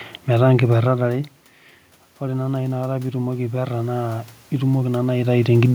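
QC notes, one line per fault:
2.19–5.58 s, automatic gain rising: the input falls by about 11 dB, and the automatic gain control gradually raises its gain by about 6 dB in response, so the voice and the room noise swell together over these three seconds.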